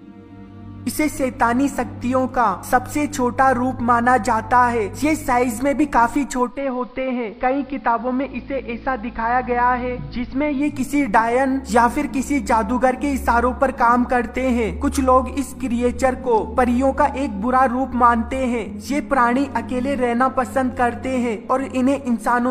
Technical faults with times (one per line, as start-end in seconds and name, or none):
6.44-10.75 digital radio blending to analogue